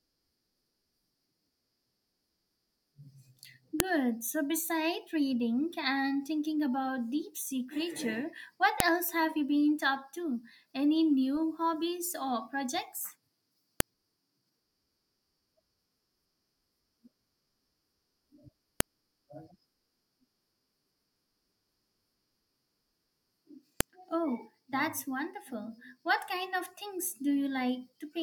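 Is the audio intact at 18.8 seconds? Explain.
No. At 18.80 s there is a sharp, loud click. This is a file header played as audio: a WAV piece was joined on without its header being stripped, so those few dozen header bytes play back as samples and snap.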